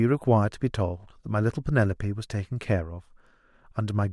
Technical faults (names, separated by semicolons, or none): none